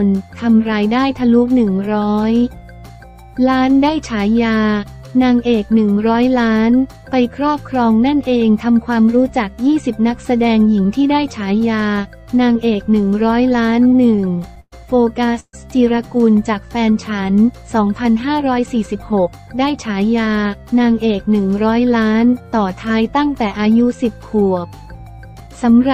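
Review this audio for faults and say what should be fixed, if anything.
Repeated stalls (stutter), 13.63 to 14.74 s: the audio catches fourteen times, with about 243 ms of held-over sound and the longest hold 116 ms, about a fifth of that stretch. Packets were arriving late or slower than playback, so the jitter buffer kept draining. Each time, the receiver stretched the last sound until data resumed. Nothing is lost, but the passage drags and stutters. A deeper or more adaptive jitter buffer on the receiving side, along with fixing the congestion upstream, would prevent this.

Call audio freeze, 15.40 to 15.55 s: the sound hangs for 133 ms, including about 40 ms of silence, then resumes exactly where it stopped. The likely cause is a single batch of packets delayed in transit, which emptied the buffer while the receiver filled the wait with a fading continuation. Nothing is missing, but a gap is inserted. 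Giving the buffer enough headroom to absorb a delay spike of roughly 130 ms would stop this.

Jitter buffer speed-up, 18.01 to 19.13 s (about 6% fast) and 25.0 to 25.65 s (about 9% fast): the buffer held more than its target. The receiver trimmed short pitch-period slices, about 70 ms in each span, so the sound runs hurried at unchanged pitch. Tuning the buffer to drain more gradually after bursts would prevent this.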